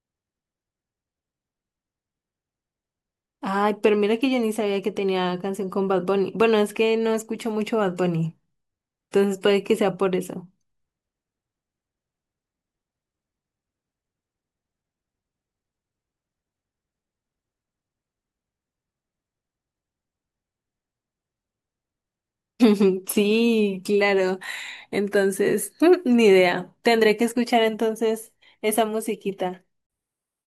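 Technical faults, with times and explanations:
7.25–30.60 s, resampler restarted on every block: from 7.25 s to the end, a steady tick pattern at 20 Hz runs under the speech, fitting a sample-rate converter (likely 44.1 kHz to 48 kHz) that processes each 50 ms block in isolation. At every block boundary the converter's filter sees silence or wrapped samples instead of the true neighbouring audio, so each edge gets a small error. Repeating twenty times a second, these errors form a buzz that appears only while the speech is present.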